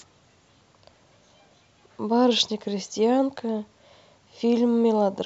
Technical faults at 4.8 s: none

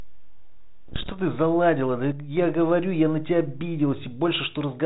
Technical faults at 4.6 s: none

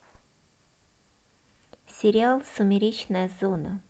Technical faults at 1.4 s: none

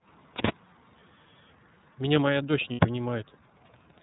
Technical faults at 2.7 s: iLBC codec; lost iLBC frames

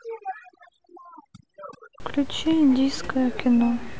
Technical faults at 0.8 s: overdone noise removal

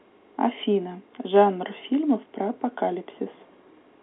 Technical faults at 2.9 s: none

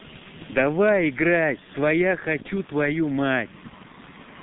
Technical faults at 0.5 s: G.723.1 codec

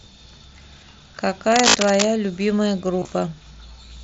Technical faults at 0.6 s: none

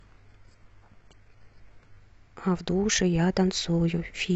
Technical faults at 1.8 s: adaptive stream starting at a low bitrate

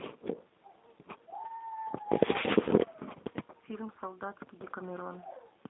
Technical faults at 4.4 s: G.729 codec

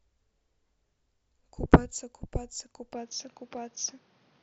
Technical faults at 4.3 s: input switched to a poorer device

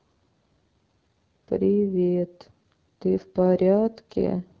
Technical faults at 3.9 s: AMR wideband (HD Voice) codec

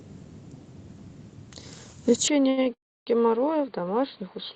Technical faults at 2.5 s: input switched to a poorer device; short stall from a late packet

